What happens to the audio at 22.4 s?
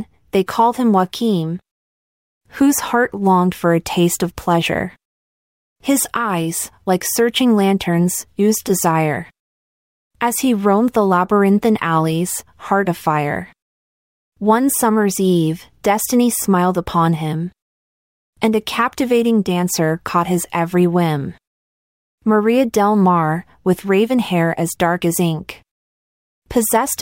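Nothing goes wrong at 22.4 s; the audio plays through that moment intact, with no dropout, click, glitch or other fault.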